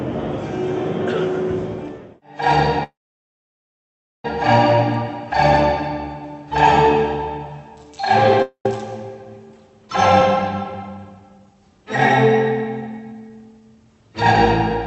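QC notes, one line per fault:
2.83–4.25 s, call audio freeze. The sound stops and a fading fill takes its place. Then about 1.3 s of silence follows. The gap lasts 1.41 s in total. The sound resumes exactly where it broke off, so nothing is lost. Everything after this point simply arrives 1.41 s later. This pattern likely comes from packets held up in transit. The jitter buffer ran dry, and the receiver stretched the last sound until the packets caught up.
8.42–8.66 s, long network dropout. This break is short, 0.23 s. A fading continuation of the last sound fills it, ending in about 90 ms of silence. When the sound returns, about 0.23 s of material is gone, so the sound jumps forward rather than picking up where it stopped. The likely cause is audio that never reached the receiver. The receiver covered the hole, and the missing part was never played.
9.89–11.87 s and 12.65–14.18 s, jitter buffer speed-up. 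Both stretches run fast at unchanged pitch, first at 108% and then at 112%. Both rates are past the point where the sound starts to feel hurried. The receiver had more audio queued than it wanted. It cut out many tiny pitch-period slices to catch up, roughly 150 ms in the first stretch and 200 ms in the second. The top of the band ends near 8 kHz, which fits the Opus call codec at about 48 kbps.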